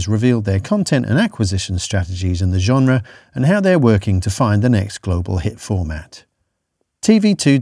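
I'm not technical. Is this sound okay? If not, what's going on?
Yes, nothing stood out as wrong when listening to this recording.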